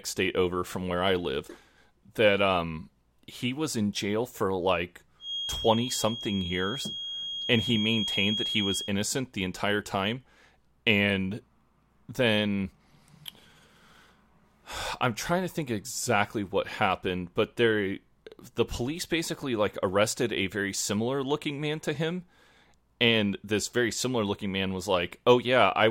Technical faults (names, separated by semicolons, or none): feedback whistle